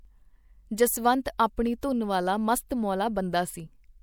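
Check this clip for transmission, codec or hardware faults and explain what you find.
Three brief pre-echo events affect this speech, at 0.77 s, 1.38 s and 1.81 s. Just ahead of each sharp onset there is a short hiss lasting roughly 12 to 17 ms, and the attack itself sounds softened and blurred. This is the signature of a transform codec working in blocks. Quantisation noise, scaled to suit the loud transient, gets spread across the whole block, so it also fills the quiet moment before the attack, where nothing masks it.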